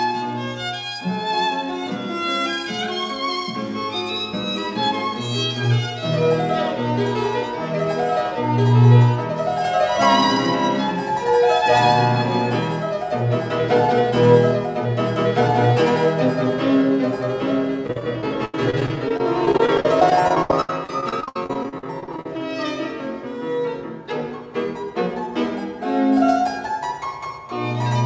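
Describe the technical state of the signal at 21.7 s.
At 21.7 s the signal is inside a run of repeated packet loss (robotic sound) lasting from 17.87 to 22.29 s. Dozens of short holes, none longer than 84 ms, are each patched by stretching the preceding sound, which leaves about a quarter of the span concealed. Unlike a single dropout, this gives a continuous choppy stutter.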